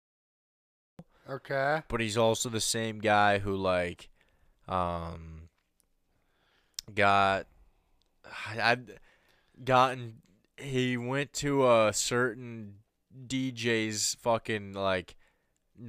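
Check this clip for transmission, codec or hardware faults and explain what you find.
There is one fault, a cut-off start. The speech jumps from digital silence into the middle of a sound at 0.99 s, with no natural attack or fade-in, because the recording or stream began late. A dropout would be silence inside running speech. This gap sits only at the very start.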